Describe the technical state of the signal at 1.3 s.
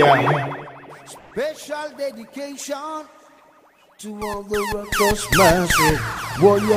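At 1.3 s the signal is inside a call audio freeze running from 1.17 to 1.33 s. The sound is held as a fading buzz or hiss continuing the last instant for 140 ms, likely because packets stalled and the jitter buffer emptied. Unlike a packet-loss dropout, nothing is skipped: the audio picks up exactly where it stopped, so everything after 1.33 s arrives about 140 ms later than before.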